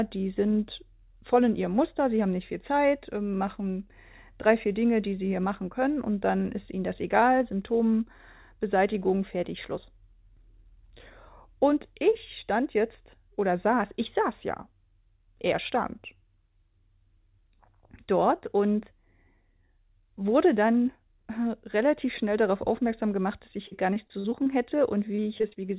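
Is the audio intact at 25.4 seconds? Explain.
No. From 25.16 to 25.57 s there is repeated packet loss, giving a robotic sound. Packets kept going missing. Each gap, the longest about 25 ms, was patched by stretching the previous sound. About 23% of the span is filled this way, so it sounds choppy.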